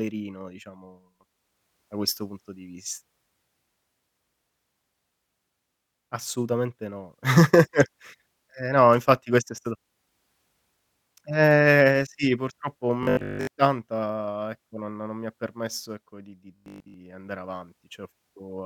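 At 13.03 s, right after "sì purtroppo", the speech turns to a rigid metallic buzz until 13.49 s, and again from 16.56 to 16.94 s after "ha permesso ecco di". This robotic sound from repeated short buffers is likely a 20 ms slice being looped while real audio is skipped, giving a 50 Hz buzz. Most of the first stretch and essentially all of the second is repeated. Spectrograms show 50 Hz-spaced harmonic bands; waveforms show identical 20 ms cycles.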